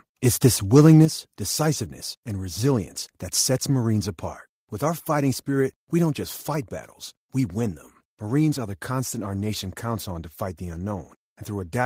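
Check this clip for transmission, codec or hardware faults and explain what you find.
Two level faults sit close together in the first second and a half of the speech.

From 0.76 to 1.01 s there is microphone overload: peaks run about 3 dB past the converter's limit, flattening roughly one sample in twenty and giving a harsh crackle, likely from excessive input gain.

At 1.05 s the microphone volume steps down by about 8 dB, likely the call software cutting input gain after the clipping. Speech and background drop together, just before "decisiveness and resilience that".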